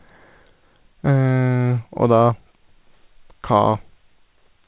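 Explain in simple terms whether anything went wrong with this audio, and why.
Nothing went wrong here; the speech has no faults.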